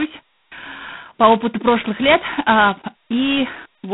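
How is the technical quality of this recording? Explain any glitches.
The quality is poor, with heavy codec damage throughout. G.726 ADPCM runs the whole clip: coarse two-bit difference coding, which fits 16 kbit/s, leaves a harsh, level-tracking rasp over speech confined to about 150 Hz–3.5 kHz, with nothing above 3.8 kHz.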